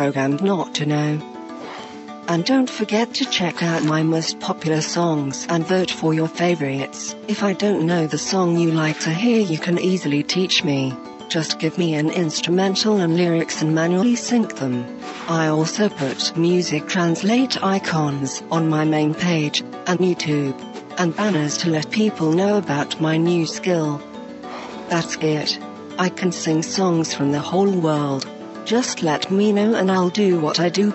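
No technical faults can be heard anywhere in the audio; the signal stays continuous and stable throughout.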